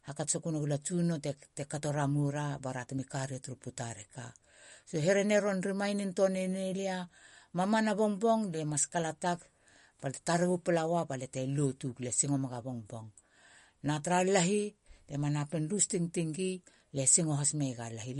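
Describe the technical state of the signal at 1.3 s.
At 1.3 s the speech carries MP3 compression artefacts, present across the whole clip. Nothing remains above 11.2 kHz, and weak spectral lines drop in and out between frames, giving a watery, swirly texture and smeared attacks. This likely comes from encoding at a bitrate near 49 kbps.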